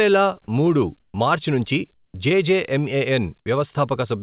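A speech recording carrying a switching supply whistle throughout: a thin, steady tone sitting at about 14.5 to 14.6 kHz, roughly 30 dB below the speech, far above the voice band, which stops at 4 kHz as expected from G.711 A-law. On a spectrogram it is a narrow horizontal line that barely drifts across the whole clip. Comfort noise replaces the background twice: from 1.0 to 1.14 s it is about 7 dB louder, and from 1.94 to 2.14 s about 13 dB quieter. This is likely from discontinuous transmission, which substitutes a smooth synthetic fill for the real background. On a spectrogram these stretches show as flat, textureless blocks at a different level. The onset is clipped by the voice detector at 2.12 s and at 3.44 s, where about 20 ms of each start is missing. The likely cause is that the detector reacted late to the returning speech. In the waveform, each onset jumps in abruptly with no gradual rise.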